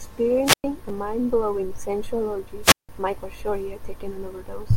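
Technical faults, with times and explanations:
0.44–0.64 s and 2.62–2.89 s, wireless microphone squelch dropout: static swells as the radio signal fades, then the receiver's squelch mutes the output for about 108 ms and 170 ms before the speech returns. That rising hiss before the silent hole sets it apart from a digital dropout's clean cut.
0.89 s and 2.39 s, repeated buffer: a tiny slice of about 5.33 ms, which fits a 256-sample buffer, plays twice more at the first point and once more at the second, with hard joins. It is so short that it sounds like a click or brief buzz rather than an audible stutter, and there is no hiss and no gap.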